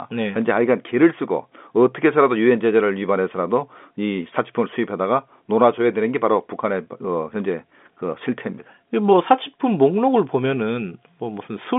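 No faults present: narrowband telephone speech carried over G.711 A-law at 64 kbps, with the line band running roughly 200 Hz to 3.5 kHz and nothing heard above about 3.7 kHz, as that coding produces.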